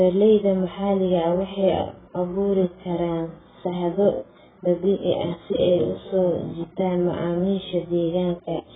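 From start to finish the speech carries heavy AAC compression damage, likely from AAC-LC coding at a very low bitrate, something near 8 kbps. Nothing is present above about 3.7 kHz, so the encoder has cut the upper band away to spend its few bits on the lower spectrum. The coarse quantisation of each frame's frequency lines leaves the sound dull and smeared, with sibilants losing their edge and a processed, degraded texture throughout.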